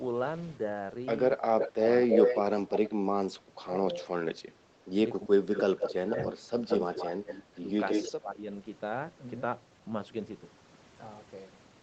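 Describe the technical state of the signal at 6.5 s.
At 6.5 s two faults overlap. Speech suppressed in double talk runs from 1.75 to 8.46 s. The echo canceller likely couldn't separate the talker from the far side, so it ducked everything. The voice dips by up to about 25 dB and breaks up in pieces, around three seconds in all.

There's also an echo leak from 5.54 to 7.35 s. A copy of the voice comes back 172 ms late, only about 5 dB under the speech. It's likely loudspeaker pickup that the loudspeaker side's canceller didn't fully remove.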